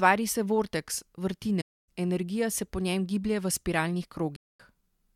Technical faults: AAC frame loss with muting

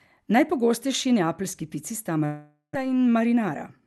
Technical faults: long network dropout; jitter buffer speed-up

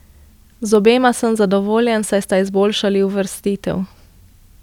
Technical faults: none

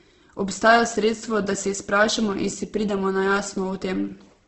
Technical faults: Opus compression

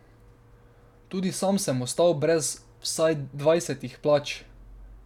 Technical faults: none

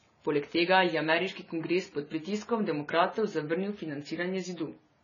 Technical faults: AAC compression

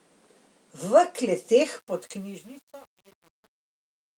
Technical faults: truncation distortion on a fade; lost packet rebuilt from error correction

